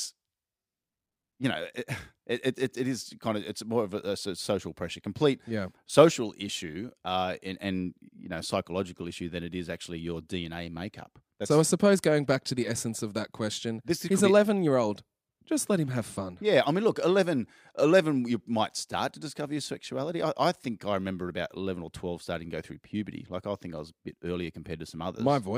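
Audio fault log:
No faults detected in the speech audio.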